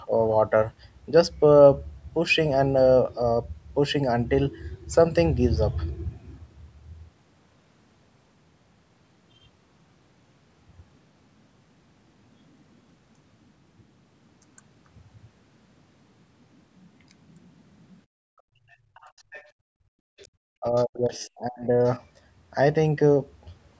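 From 18.06 to 19.95 s the echo canceller clamped the microphone hard, gating the background: the room sound drops by up to about 34 dB, for roughly a second and a half in total.

Between 18.7 and 19.51 s the other side's voice is leaking through, likely residual echo the canceller failed to remove, heard faintly, around 25 dB below the speech. Brief scraps return at 20.18–20.25, 20.77–20.83 and 21.21–21.27 s, even fainter.

From 20.23 to 21.74 s the talker's speech is suppressed in double talk, likely because the canceller couldn't separate it from loudspeaker echo, so the speech dips by as much as about 35 dB, for roughly a second in total.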